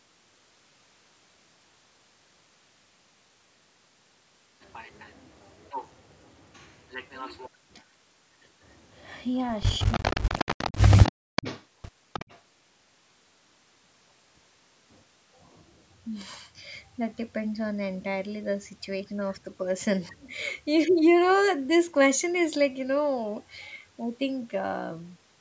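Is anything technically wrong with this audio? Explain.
Yes, there are two related faults, both pointing to echo cancellation on a speakerphone call.

Echo leak, from 9.79 to 11.12 s, 11.36 to 11.63 s and 12.13 to 12.38 s: the far end's echo canceller likely failed to remove all of its loudspeaker pickup, so a copy of the speech returns about 315 ms late. It sits roughly 10 dB below the direct speech, and about 15 dB below in the last stretch.

Speech suppressed in double talk, at 9.85 to 10.03 s, 10.21 to 10.28 s and 11.10 to 11.36 s: while both sides talked, the canceller likely mistook the talker for echo and clamped down. The speech drops very deeply in brief bites, about 70 ms to a third of a second each.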